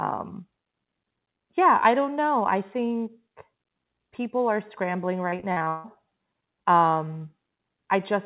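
From 5.30 to 5.86 s the speech turns choppy and robotic: repeated packet loss. About seven holes open in that half second, the longest roughly 156 ms, and each is bridged by stretching the last received sound, so over half the span is concealment. On a spectrogram the stretch shows smeared, frozen harmonic bands with abrupt seams. The waveform shows looped, oddly regular cycles instead of natural variation, all within a band ending at 4 kHz, which fits a G.711 call path.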